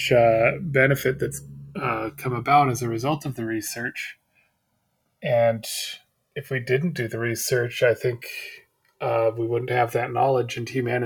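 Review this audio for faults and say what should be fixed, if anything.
Channels drifting apart: separately clocked devices let the delay between channels grow to roughly 3 ms, so in mono, sweeping comb notches produce slow flanging throughout the speech. To prevent it, lock both capture devices to one shared clock, or resample one channel to match the other before combining them.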